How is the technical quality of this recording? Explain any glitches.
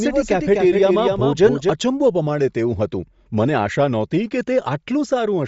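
The technical quality is compromised by two problems: codec damage across the whole clip and a doubled copy of the speech at the start.

Throughout the clip, the speech has a breathy, grainy edge, and nothing is present above about 7.7 kHz. This is likely Bluetooth LC3 compression, a transform codec that cuts the upper spectrum and fills bands with noise. The sound fits a low bitrate near 32 kbps with 10 ms frames. On a spectrogram, energy stops at a hard ceiling near 7.7 kHz, and speckled, noisy patches appear below it.

From the opening until 1.7 s, a doubled audio track is heard. The same speech repeats roughly a third of a second behind and about 5 dB quieter, with no reverb or room colour. The echo is already under way when the clip begins and stops abruptly at 1.7 s. This is likely a second capture path or an edit holding two copies out of step. A spectrogram shows each syllable's pattern repeated at a fixed lag, and the waveform shows a fainter duplicate envelope that vanishes at 1.7 s.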